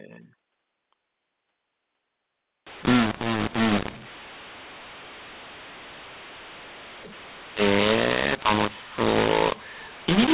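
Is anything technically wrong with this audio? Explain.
Yes. From 2.67 s to the end, A-law-coded telephone speech is decoded as mu-law, a mu-law and A-law mix-up: levels scramble, pauses fill with hiss, and the waveform shows raised noise floors and distorted peaks.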